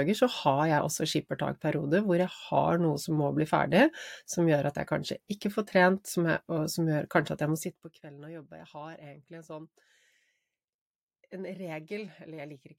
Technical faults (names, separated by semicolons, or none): none